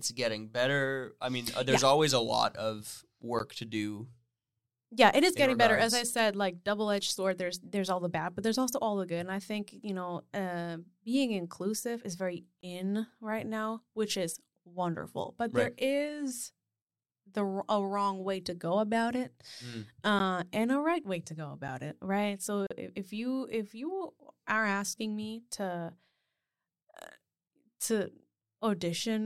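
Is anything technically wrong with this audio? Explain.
Yes. Speech in this clip has five blocks of digital silence. The first is at 3.39 s, between "always a lot of" and "to do". The second runs 12.61 to 12.63 s, between "being inclusive is very" and "in right now which". The others are at 20.19 s, at 21.68 s, and from 22.67 to 22.71 s, just before "if if you if". Each time, the signal drops to silence and returns with no fade.

The shortest gaps, about 8 and 12 ms, sound like ticks. The 23 ms and 38 ms gaps are heard as brief holes. The 11.6 ms and 23.2 ms lengths fit 512-sample and 1024-sample buffers, which points to an output buffer that was not filled in time.

Two things tell this apart from a network dropout that has been concealed or smoothed over: the sound falls to true silence rather than a lowered level, and there is no crossfade at either edge.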